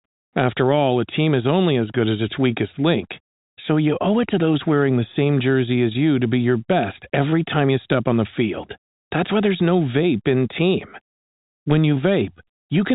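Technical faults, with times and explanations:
No technical faults are heard, so there are no times or explanations to give.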